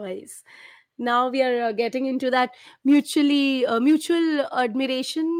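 No technical faults are audible.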